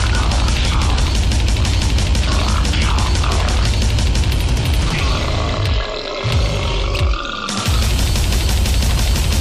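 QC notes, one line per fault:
Nothing to flag here; I listened all the way through and didn't hear any technical faults at all.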